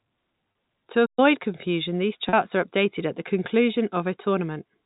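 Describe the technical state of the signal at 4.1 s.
At 4.1 s the speech is intact, with no fault at that point, carried through the narrow telephone band of G.711 coding, which passes nothing above 4 kHz.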